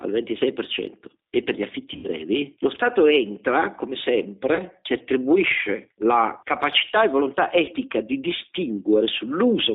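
Throughout the speech, the background swells in pauses and dips by about 5 dB under loud syllables, likely gain pumping from an overdriven input and a fast limiter. The waveform envelope looks flattened. G.729 codec coloration is plainly audible as rough, slightly synthetic speech confined to roughly 250 Hz to 3.7 kHz, which fits an 8 kbit/s G.729A stream. On a spectrogram the energy stops sharply at both band edges. VoIP packet loss concealed by the speech codec appears from 1.94 to 2.08 s, right after "e per gli affitti", with about 90 ms of scattered gaps. There it sounds like a fading, stretched buzzy tone or coloured noise. A shorter dropout follows at 4.55 to 4.62 s, just before "si attribuisce la capacità". Another occurs at 7.65 to 7.72 s, after "la capacità e volontà". On a spectrogram, each dropout shows smeared, repeated harmonics decaying in level.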